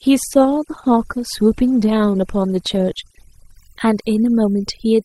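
Throughout the clip, the background drops to near silence dotted with twinkling specks. This is overdone noise removal: the reduction was set so strong that it shut down individual frequency bands near its noise estimate, taking quieter parts of the speech with them.

From 0.0 to 3.55 s the treble is dull or synthetic and codec artefacts are heavier, then quality improves abruptly with no gap. This is an adaptive stream starting at a low bitrate. The sound fits Opus at around 16 kbit/s stepping up to about 64 kbit/s, with nothing above 12.4 kHz.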